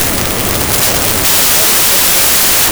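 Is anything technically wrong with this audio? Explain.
Yes. A wrong sample width fault runs through the whole speech clip. The sound fits 16-bit data being read as packed 24-bit samples. Each new value is built from bytes that belonged to different original samples, so a loud hiss dominates and the speech survives only as a buried trace. Because three bytes are taken per sample instead of two, the speech plays 1.5 times too fast and sounds correspondingly higher in pitch. The speed shift sets it apart from a byte-order error, which adds noise but keeps the timing.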